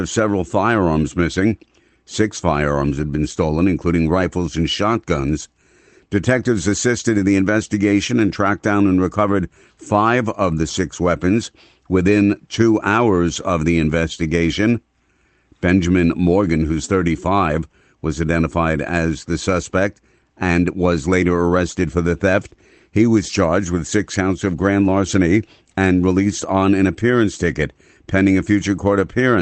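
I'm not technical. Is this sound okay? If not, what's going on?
Yes, this speech came through a normal internet call connection that carries sound up to about 8 kHz, and nothing in it is going wrong.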